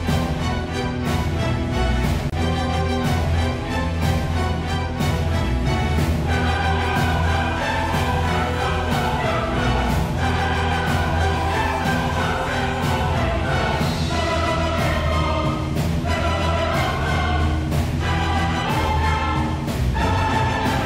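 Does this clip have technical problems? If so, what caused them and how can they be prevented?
Yes. From 2.30 to 2.32 s there is a gap at a join of encoded pieces: a 26.5 ms gap with smeared edges, left by the encoder's start-up delay and last-frame padding. Unlike a dropout, nothing is missing, because the sound resumes exactly where it stopped. Trimming encoder delay and padding before joining, or encoding the material as one continuous piece, prevents it.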